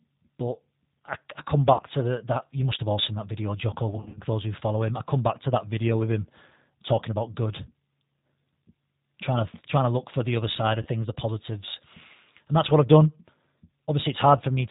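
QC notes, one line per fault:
throughout, G.729 codec: the speech was coded at a rate that fits 8 kbit/s G.729A, which rebuilds it from a vocal tract filter, a pitch predictor and a few pulses per 10 ms frame, passing nothing above 4 kHz. The result is plainly band-limited, slightly rough and synthetic.
1.73–1.82 s, 3.96–4.21 s, 10.82–10.88 s, VoIP packet loss concealed by the speech codec: packets dropped and the decoder extended its last pitch and filter at falling gain, smearing the speech into fading buzz or coloured noise. About 60 ms was lost at 1.73 s, 150 ms in runs of up to 50 ms across 200 ms at 3.96 s, and 30 ms at 10.82 s. Speech stays weak briefly afterwards.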